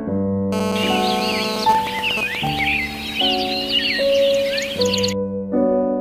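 From 0.53 to 1.65 s there's GSM phone buzz: a nearby 2G phone in a call, rectified by the audio circuit, giving a harsh, raspy 217 Hz buzz about 5 dB below the signal. Then from 1.69 to 2.59 s come GSM signalling bursts, a nearby phone sending only sparse bursts while its user is silent, so you get even ticks with a longer buzz twice a second, a bit under the signal level.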